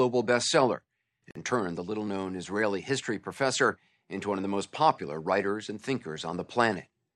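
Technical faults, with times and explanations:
1.31 to 1.35 s, Bluetooth stall: the speech drops to dead silence for about 46 ms, then carries on from where it cut out. That's likely radio interference holding up packets long enough for the headphones' buffer to run dry before the resends arrived.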